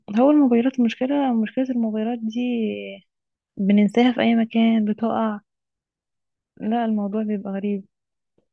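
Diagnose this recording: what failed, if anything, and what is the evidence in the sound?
Nothing in the chain failed.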